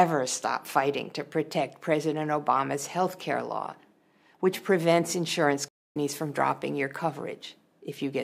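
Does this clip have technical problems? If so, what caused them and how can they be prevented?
Yes. At 5.68 s the sound cuts off abruptly in mid-flow and stays silent until 5.97 s, a gap of about 0.27 s, after which it picks up again. This is a playback stall, most likely the player draining its buffer or having its audio thread blocked. On a waveform it shows as a flat line, and on a spectrogram as a clean vertical band of empty space. Larger playback buffers and a high-priority audio thread help prevent it.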